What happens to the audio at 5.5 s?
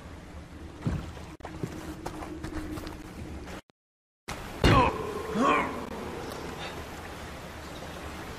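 Nothing goes wrong at 5.5 s: the audio carries straight through that moment without any dropout, glitch or other disturbance.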